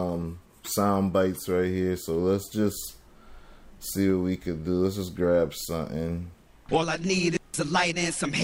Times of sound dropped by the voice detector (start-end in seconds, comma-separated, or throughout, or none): none